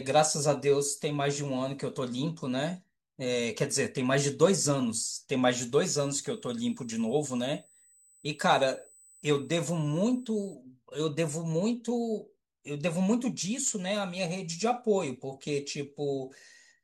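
A thin, steady, high-pitched whine sits underneath this speech clip from 5.73 to 10.55 s, pinned at 8 kHz with no drift in pitch and roughly 30 dB below the speech. This is USB whine: the bus pulls current in bursts every 125 microseconds, the microframe rate, and that ripple leaks into the audio through shared power or ground, so it surfaces as a fixed tone at exactly 8 kHz for the stretch where it's present.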